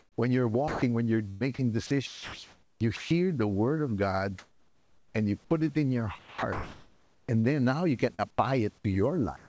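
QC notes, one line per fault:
0.00–3.11 s, 6.19–7.46 s, 8.14–8.84 s, sound chopped by the voice detector: the sender's detector likely kept toggling, swapping about 1.39 s, 1.04 s and 0.12 s for synthetic fill. That's why it sounds choppy before "the word of", between "put it in your" and "then now you", and after that.
4.39–5.15 s and 9.36–9.48 s, comfort noise in place of the background: with transmission paused, a smoother synthetic noise stands in for the real room tone, at about 37 and 36 dB below the loud parts. The second patch changes level by about 2 dB, likely discontinuous-transmission fill.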